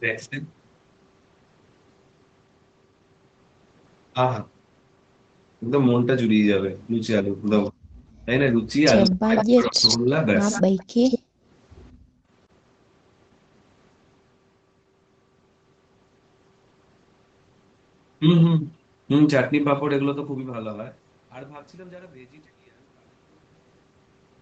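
At 7.7 s the speech briefly sinks by around 30 dB for a few hundredths of a second. This is speech suppressed in double talk, likely caused by an echo canceller that heard both sides at once and could not tell this talker from its own loudspeaker echo, so it turned everything down. What sets it apart is that the talker's own voice is cut while the far side is active, not just the quiet room between phrases.

From 8.11 to 8.25 s the background is gated by the echo canceller. The room sound drops by about 25 dB while the loudspeaker plays, then comes back when the canceller releases. This is a gap in the ambience, not a bite out of active speech.

From 9.04 to 9.97 s an echo leak is heard. A copy of the voice arrives 151 ms late, only a few decibels below the direct speech, likely because the loudspeaker side's canceller let loudspeaker pickup through. Unlike the suppression faults, this adds sound rather than removing it.

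Overlapping it, from 9.1 to 10.12 s, double-talk suppression returns for about a second, with the talker's speech pulled down by as much as 40 dB.

The echo leak recurs from 10.5 to 11.19 s, again 151 ms behind the speech. Within it, a roughly 100 ms suppression dip of about 40 dB falls at 10.6 s.

Background gating follows at 11.19 to 11.44 s, at about 38 dB deep, and at 11.92 to 12.3 s, at about 35 dB, each time pulling the room tone down. Throughout, the band stops at 8 kHz, as the call's microphone processing leaves it.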